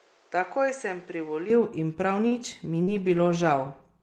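From the start to 1.5 s, the speech sounds dull or boxy. Nothing reaches above 8.4 kHz. The level sits about 5 dB lower, and a background noise lies roughly 30 dB under the speech. At 1.5 s the sound clears, with no gap, just before "in prav". This points to an input switched to a poorer device, likely a different microphone or a headset's call profile, with its own narrow band, tone and noise.

Right after "in prav", at 2.27 s, there is a short stall from a late packet. The jitter buffer ran dry. The receiver held the last sound for 38 ms until the packet came, then resumed where it left off. Nothing is lost. The sound simply lingers too long, with a slight buzz or dip. The playback delay is 38 ms longer from then on.

At 2.83 s comes a short concealed packet loss. About 40 ms of audio never arrived. The decoder covered the gap by extending the preceding sound for 39 ms, then blended back into the real signal. 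It is heard as a brief smear or wobble. Whatever fell in that gap is missing.

From 2.94 s to the end there is a call bitrate drop. The bandwidth estimate fell, and the encoder went from 32 to 16 kbps for about 1.09 s. At half the bits, Opus codes more coarsely. The speech turns rough, watery or muffled, and it stays that way to the end.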